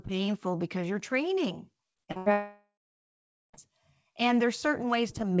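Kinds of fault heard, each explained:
Repeated packet loss (robotic sound): From 1.94 to 2.28 s, four short holes open in the speech, the longest 84 ms. Each is patched by stretching the preceding sound, so about half of this stretch is filled-in material, giving a choppy, robotic texture.
Long network dropout: From 2.32 to 3.55 s the speech gives way to a continued buzz that fades, then roughly 0.8 s of silence. This is likely a network outage during which about 1.2 s of audio never arrived, and the speech resumes without it.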